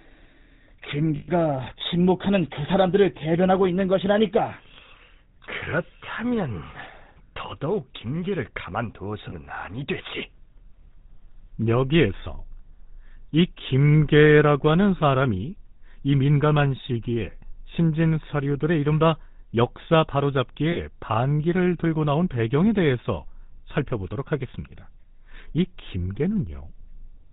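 Throughout, the speech carries the buzzy, gravelly roughness of the GSM full-rate codec, with nothing above 4 kHz, which points to 13 kbps full-rate GSM. Plain band-limiting would sound muffled but smooth; this grit comes from the coarse pulse excitation. Lost GSM frames follow at 1.16 to 1.29 s, 9.30 to 9.34 s, and 20.72 to 20.78 s. The first, about 120 ms, fits six lost frames. Each one holds the previous sound as a rough metallic ring, where a plain dropout would simply go silent.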